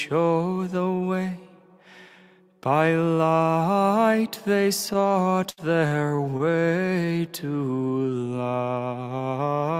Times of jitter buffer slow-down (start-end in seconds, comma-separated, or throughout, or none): 7.05-7.33